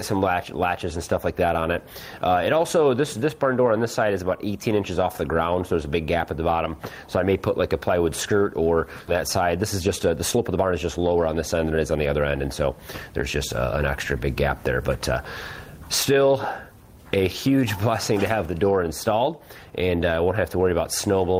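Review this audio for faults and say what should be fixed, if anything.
A skip ahead happens at 9.07 to 9.09 s. Around 0.7 s of audio is missing and nothing fills the hole. The sound on either side of the jump is joined almost directly, so playback lurches forward. This happens when a stretch is lost in transit, or when an overflowing jitter buffer discards it while later audio is already queued. On a waveform the envelope changes abruptly at the join. On a spectrogram the harmonic patterns break off and restart without any silent gap. To prevent it, size the jitter buffer with enough headroom for bursts and let it drain gradually rather than dropping whole stretches.

A jitter buffer speed-up runs from 9.41 to 12.15 s at 112% speed, removing roughly 0.3 s in total. The buffer was holding more audio than its target, so the receiver repeatedly cut out short pieces of one or a few pitch periods to reduce the delay. 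The pitch stays the same, but the passage sounds hurried. On a spectrogram, events in that span are compressed in time while harmonic spacing stays unchanged. To prevent it, cap the speed-up rate well below 105% and spread the catch-up over a longer span.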